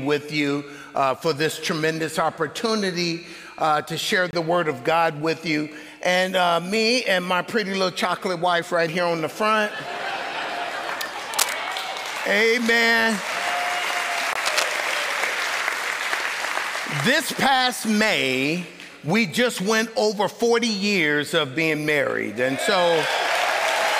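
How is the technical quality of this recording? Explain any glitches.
The recording has two kinds of glitch: short dropouts at regular intervals, and two brief bursts of scratchy noise.

Gap between chunks, at 4.31 to 4.33 s and again at 14.33 to 14.35 s: the audio appears to have been handled in 10-second chunks, and a hole of about 23 ms opens at each join. No sound is lost; playback simply pauses before the next chunk resumes. Each gap is a quick dropout, and the two fall about 10 s apart.

Cable scratch noise, at 11.34 to 11.56 s and 14.46 to 14.63 s: dense, uneven crackling sits over the audio for roughly a fifth of a second each time, at about the same level as the sound itself. The likely cause is a worn cable, connector or control being moved, so that its contact resistance jumps around rapidly. The second burst follows the second gap by about a tenth of a second.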